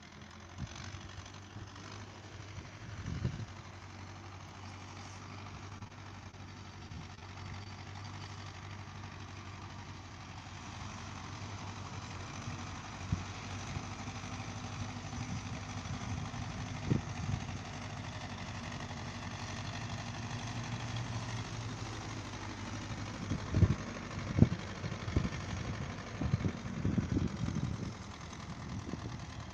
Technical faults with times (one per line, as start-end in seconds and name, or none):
5.69-6.35 repeated packet loss (robotic sound)
7.15-7.19 short concealed packet loss
7.19-7.24 short stall from a late packet
7.64-7.67 short concealed packet loss